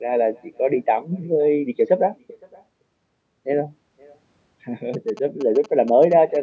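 Echo with no canceller runs through the whole clip. The far end is playing the call over a loudspeaker, and its microphone sends that sound back uncorrected, so every phrase returns about half a second later as a thin shadow roughly 28 dB below the speech.

GSM signalling bursts appear from 4.94 s to 6.37 s. A nearby 2G phone is exchanging short groups of radio bursts, and the audio circuitry rectifies them into a galloping dit-dit-dit of short buzzes at 217 Hz, sitting around 20 dB under the speech.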